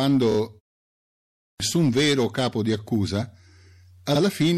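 Hard clipping runs through the whole clip: the speech is driven about 6 dB past what a stage can pass, so a few percent of samples have their peaks sliced flat. Those flattened tops add high harmonics, giving crackle on the peaks.

MP3 compression is also present throughout and is plainly audible. Weak spectral detail flickers in and out between frames, so the sound turns watery and swirly, with metallic chirps on sibilants and smeared attacks. This points to a low bitrate of around 64 kbps, the likely cause.

Repeated frames first appear at 0.30 to 0.36 s. A 26 ms block, which fits a single MP3 frame, is played twice more in a row, making a quick stutter. This adds 52 ms to the audio.

A clipped start after a pause comes at 0.99 to 1.60 s. After about 0.47 s of silence, the output device apparently needs time to wake or relock, and roughly 0.61 s of sound is lost. As a result, "vero capo di" bursts in abruptly, missing its onset.

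Repeated frames occur again at 4.14 to 4.20 s. This time a longer 52 ms block, consistent with two frames, is replayed once. That produces a brief doubled stutter and adds another 52 ms.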